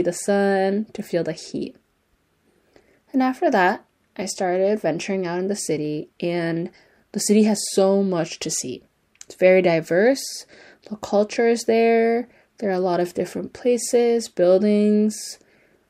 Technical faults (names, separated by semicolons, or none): none